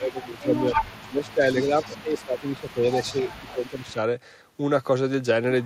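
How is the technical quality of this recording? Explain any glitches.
The recording has two call-processing problems tangled together through most of the first four seconds.

Speech suppressed in double talk runs from 0.0 to 2.85 s and again from 3.04 to 3.97 s. Your talker dips by up to about 15 dB, likely because the echo canceller ducked everything while both sides spoke.

Echo leak shows up from 0.11 to 0.93 s, 1.29 to 2.23 s and 2.67 to 3.93 s. It's a copy of the voice trailing by 255 ms. The first stretch is about as loud as the speech, and the later ones sit about 25 dB down.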